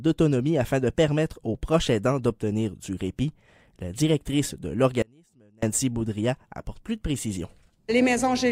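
At 5.02 s the sound cuts out abruptly and returns at 5.63 s, an audio dropout to a faint residue lasting about 0.6 s. The wanted signal was likely lost upstream while the path after the break stayed live, so the gap is not silent but holds a faint leak of the sound roughly 35 dB below its normal level. The hard edges at both ends set it apart from a natural pause or a fade.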